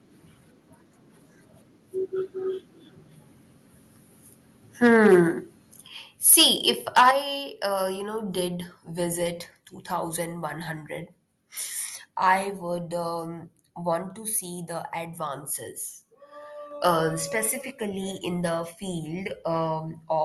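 At 5.88 s the speech and the background drop together by about 6 dB in one instant, with nothing in the sound itself to explain it. This is a microphone volume stepped down, likely the call software cutting the device's input volume in a single step after judging it too hot.

From 6.26 to 6.69 s, and again from 6.96 to 7.10 s, the loudest syllables take on a harsh, crackling edge, with peaks driven about 8 dB past the converter's limit and roughly 4% and then 7% of samples flattened. This is microphone overload, likely because the input volume was set so high that the waveform tops hit the converter's limit and were sheared off.

Right after the second overload, at 7.11 s, just before "uh you", the level steps down again, this time by about 8 dB. It is likely the same software reaction to the clipping that had just occurred.

At 16.71 s, just before "uh specifically in the", the speech and background jump up together by about 4 dB in one step. 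This is a microphone volume stepped up, where the call software decided the input had become too quiet and raised the device volume.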